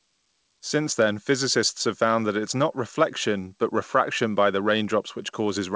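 No technical faults are audible in the speech; it has come through a call path whose band limit leaves nothing above 8 kHz, which fits a wideband codec such as G.722 at 64 kbps.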